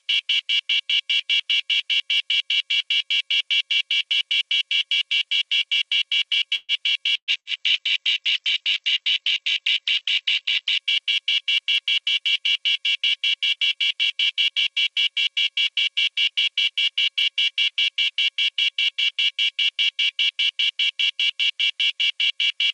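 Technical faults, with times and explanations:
6.55 to 6.72 s, call audio freeze: the sound stalls into a fading buzz or hiss for about 130 ms, then resumes intact, likely a delayed-packet stall emptying the jitter buffer.
7.17 to 7.31 s and 7.40 to 7.60 s, burst of packet loss: lost packets were concealed by a decaying continuation, then playback jumps ahead, dropping about 120 ms and 60 ms respectively.
7.33 to 10.89 s, call bitrate drop: encoding falls from 96 to 9 kbps and bandwidth from 16 kHz to 8 kHz, leaving the sound muffled and coarse for about 3.5 s.
11.8 to 14.51 s, jitter buffer speed-up: the receiver trims short pitch-period pieces to shed excess buffering, running about 4% fast at unchanged pitch, roughly 150 ms removed.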